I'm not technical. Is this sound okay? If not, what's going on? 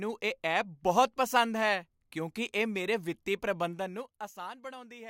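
No. From about 3.58 to 4.57 seconds there is zipper noise. The speech is being turned down a good deal over that second, but instead of gliding smoothly the level drops in many small steps, roughly twenty per second. Each step leaves a tiny click, and together they make a fast ticking or zipping sound riding on the speech while the volume falls.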